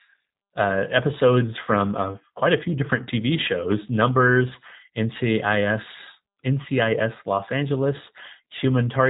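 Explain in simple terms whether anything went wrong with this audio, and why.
Throughout, the G.729 codec rebuilt the speech from a simple model and cut everything above 3.8 kHz, so it sounds thin and slightly robotic.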